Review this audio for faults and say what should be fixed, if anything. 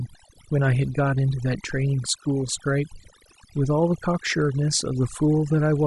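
Overdone noise removal runs through the whole speech clip: the noise reduction was set so strong that frequency bands near its noise estimate are pulled almost to silence, taking quieter parts of the voice along. The background becomes near silence with twinkling specks. To prevent it, use a gentler reduction amount and check the result by ear before committing the processing.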